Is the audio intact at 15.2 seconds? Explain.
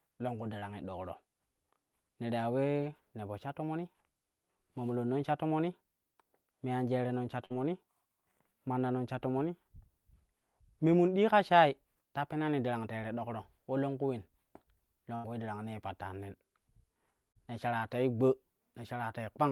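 No. A burst of packet loss runs from 15.15 to 15.26 s. The receiver fills about 86 ms by extending the last received speech and fading it down. When the speech resumes, roughly 80 ms of the original is missing.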